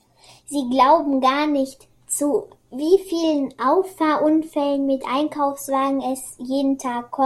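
Nothing technically wrong turns up anywhere in this short speech recording, so there are no faults here to point to.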